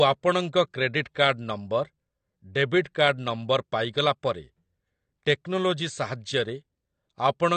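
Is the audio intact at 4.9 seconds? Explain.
No. At 4.9 seconds the speech carries the AAC compression damage present throughout the clip. Nothing is heard above about 8.5 kHz, and the remaining band sounds dull and smeared, with a fizzy, warbling texture on sibilants and sustained sounds. The likely cause is AAC-LC coding at a low bitrate, which fits roughly 32 kbps. Short of bits, the encoder lowers its cut-off and quantises the frequency lines coarsely, leaving gaps and substitute noise in the spectrum.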